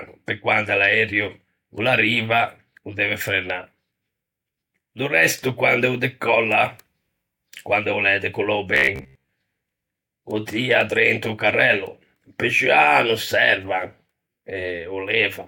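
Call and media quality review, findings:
Robotic sound from repeated short buffers, 8.75 to 9.29 s. Speech collapses into a rigid metallic buzz near 67 Hz, still loosely tracking the speech. Likely jitter buffer underrun: the playout side kept re-looping roughly 15 ms segments, matching the 67 Hz buzz, while most of the real audio in that span was dropped.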